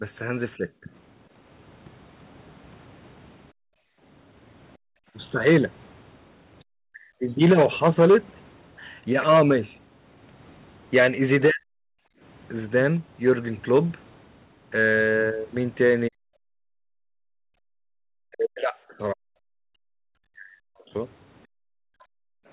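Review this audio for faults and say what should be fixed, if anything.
Speech suppressed in double talk at 0.0–0.89, 6.89–7.26, 11.49–11.74 and 16.09–22.05 s: the speech dips by about 10 dB at first, then by about 40 dB later. The likely cause is the echo canceller mistaking overlapping talk for echo. Unlike gating, the speech itself is cut.

Background gated by the echo canceller at 3.52–5.14, 12.02–12.21, 16.47–17.96 and 21.47–22.48 s: the room tone drops out by up to about 40 dB while the far end plays, then returns.

To prevent both, tune the echo canceller's double-talk detection and suppression, and ease its gating with comfort noise.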